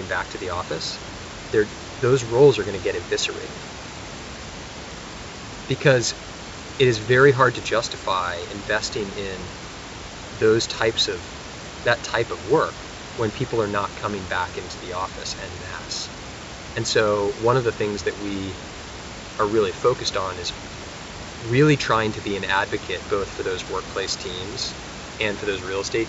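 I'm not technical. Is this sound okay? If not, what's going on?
Yes, this one's fine, with nothing going wrong anywhere in the recording that you'd need to worry about.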